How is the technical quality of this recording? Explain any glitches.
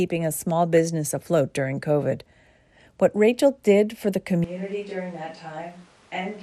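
The recording has audible technical faults: a dull, coarse coding texture throughout, a brief burble early on, and an abrupt change in microphone perspective near the end.

Throughout, the speech sounds dull, with a gurgling, granular edge. The likely cause is MP2 compression at a low rate, fitting something around 80 kbps. Too few bits force upper sub-bands to switch off or flicker, and the remaining bands are coarsely quantised.

At 0.77 s there are a few momentary watery blips, typical of DAB burbling. Weak reception let bit errors, at a small fraction of a percent, slip past error correction into the MP2 data. Corrupted samples put short blips of noise in single sub-bands, and corrupted scale factors make sub-bands jump briefly in level.

From 4.44 s to the end, the sound abruptly turns roomy and hollow with thinner bass. The level drops by about 10 dB, and room noise sits about 25 dB below the speech. 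This is a switch to a distant microphone, likely after the close microphone's signal was lost.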